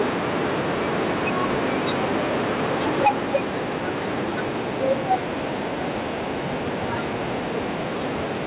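From 2.88 to 3.37 s the speech breaks up into a harsh, crackling rasp. This sounds like microphone overload. The input was likely driven about 14 dB past full scale, so roughly one sample in twenty has its peak flattened. At 3.07 s, midway through that burst, the microphone volume steps down by about 3 dB. Voice and background drop together, which points to software pulling the input gain down in one move. From 4.88 to 5.15 s a milder overload returns, about 3 dB over, with only a small share of peaks clipped and a lighter grit on the loudest sounds. The audio also stops at 4 kHz, which fits a narrowband telephone codec.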